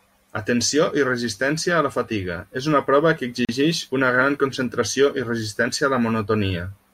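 At 3.45 s the speech drops into a gap at a join of encoded pieces, a silence of about 38 ms lasting to 3.49 s. Two separately encoded segments were butted together untrimmed, so encoder start delay and last-frame padding remain, leaving smeared edges before speech resumes.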